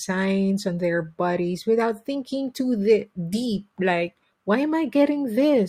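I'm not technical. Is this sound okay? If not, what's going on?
No, not quite. There's clock drift between sender and receiver: the device that recorded or sent this speech keeps time a little fast, by roughly 4 percent, compared with the one playing it back. The two never quite agree on how long a second is, so the receiving end keeps ending up with slightly more audio than it expected and has to deal with the surplus all the way through.

That shows up as repeated timing corrections from about 0.09 s to 5.54 s. To keep pace with audio arriving at about 104 percent speed, the receiver keeps snipping out tiny slivers, always trimming and never padding, at uneven gaps. Each cut is small, so you'd notice at most a faint hiccup or a slightly unsteady, rushed rhythm rather than anything obviously broken.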